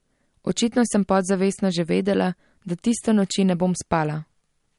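Throughout the speech, nothing is heard above about 11.2 kHz, and the dull, smeared quality points to low-bitrate audio saved at a high bitrate, likely an MP3 at 48 kbit/s re-encoded at 256 kbit/s.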